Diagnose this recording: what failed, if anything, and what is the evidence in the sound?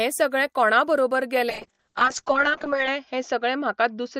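Call bitrate drop in the codec: from 1.51 s the speech goes rough and muffled as the encoder falls from 32 to 6 kbps, with bandwidth cut to 8 kHz.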